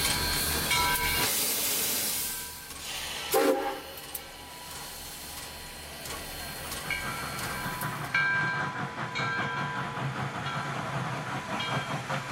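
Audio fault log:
No technical faults are audible, and the signal stays continuous and stable for its whole duration.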